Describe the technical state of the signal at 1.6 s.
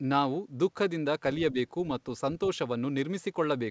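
Around 1.6 s the speech dips briefly, from 1.52 to 1.57 s, falling by roughly 5 dB. This is likely speech suppressed in double talk. The echo canceller, with both sides talking at once, pulled the near talker's level down along with the echo.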